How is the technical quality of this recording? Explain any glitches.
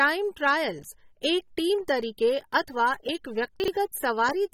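The recording has plainly audible codec damage throughout and one brief jumbled moment near the end.

Across the whole speech clip the sound is dulled and smeared, with a fizzy, warbling texture on sibilants and nothing above 16.6 kHz. The likely cause is AAC compression. An AAC-LC encoder splits each frame into frequency lines and quantises them coarsely against a hearing model, trimming the top of the spectrum and thinning detail, which fits a low bitrate of around 32 kbps.

From 3.6 to 3.68 s there is a short garbled moment, caused by chunks out of order. One 40 ms chunk of audio turned up a chunk late and plays after the one that should follow it. Nothing is missing, but the swapped order creates three hard joins within that jumbled instant.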